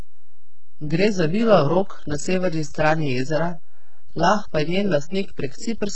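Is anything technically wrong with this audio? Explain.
Yes, two things run through the whole clip. The first is DC offset: the waveform sits shifted off zero by a constant amount for all of it. You won't hear that directly, but it eats into headroom and shows up as a steady lump of energy at the very bottom of the spectrum.

The second is heavy codec damage that sounds like HE-AAC compression, likely at a very low bitrate, around 8 kbps. Only the lower band is really coded, and the treble up to a cutoff at 8 kHz is rebuilt by copying lower bands upward, so harmonics don't line up and s sounds come out gritty and metallic.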